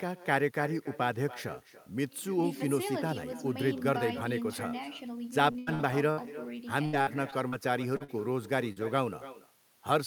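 Echo with no canceller runs through the whole clip. The far end's loudspeaker feeds its microphone and nothing subtracts it, so the speech returns roughly a third of a second later as a thinner copy about 16 dB below the original.

Repeated packet loss (robotic sound) hits from 5.51 to 6.24 s and again from 6.86 to 7.55 s. Audio keeps failing to arrive, with gaps up to 80 ms, and each hole is bridged by stretching the preceding sound. About a third and a quarter of these spans respectively are synthetic, giving a choppy texture with fragments missing.

Short concealed packet loss follows at 7.96 to 8.03 s, 8.04 to 8.11 s and 8.72 to 8.79 s. Each time about 40 ms failed to reach the decoder, and the receiver extrapolated from the last sound before blending back, leaving a brief smear or wobble.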